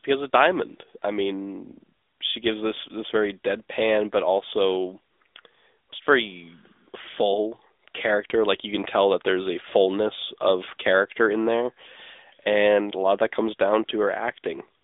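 The speech has passed through the AMR narrowband mobile codec from start to finish. The signal was squeezed into a telephone channel: nothing above 3.8 kHz survives, and the band sits roughly between 300 Hz and 3.6 kHz, so the voice sounds thin and boxed-in. The codec's vocal-tract model, rebuilding each short frame from a few pulses, leaves plainly audible damage, a buzzy, synthetic edge that fits a mid-range rate near 10.2 kbps.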